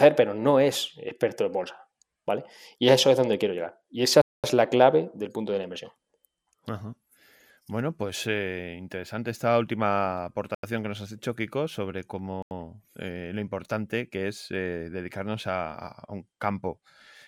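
At 4.22 s, just before "es la clave del", the speech drops into a block of digital silence for 0.22 s. Similar 85 ms holes follow at 10.55 s, after "eh interesante esta última", and at 12.42 s, before "eh lo importante que". Each fits a 4096-sample buffer left unfilled. The sound cuts out and back with no fade.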